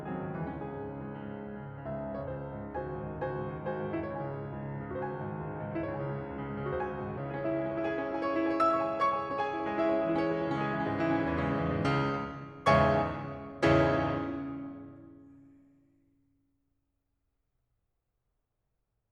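From 8.36 s to 9.48 s the music goes through a jitter buffer speed-up. The receiver's buffer had filled beyond its target depth, so to drain the excess it repeatedly cut out short segments of one or a few pitch periods, removing about 50 ms in total. Playback runs at roughly 105% speed while the pitch stays unchanged, so the passage sounds briefly rushed and the steady tempo lurches forward before settling again.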